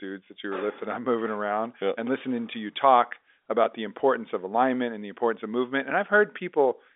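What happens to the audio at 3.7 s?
Nothing goes wrong at 3.7 s: the audio there is intact, simply carrying the narrow telephone band of its G.711 coding.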